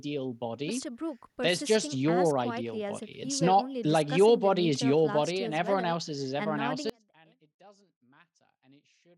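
At 6.9 s the speech drops out abruptly and never recovers. This is an audio dropout to a faint residue. From that point to the end only a faint trace of the signal remains, roughly 30 dB below its normal level. The path was likely still live after losing the wanted signal, so a weak leak carried on instead of true silence. On a waveform the envelope collapses in a single step to a thin band. On a spectrogram the bright speech energy gives way at once to a dim wash.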